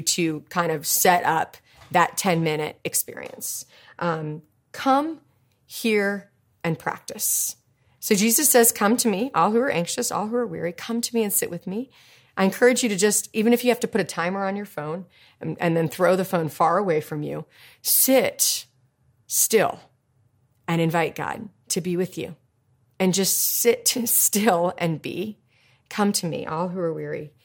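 No technical faults can be heard anywhere in this speech recording. There is no moment in it that needs a time or an explanation.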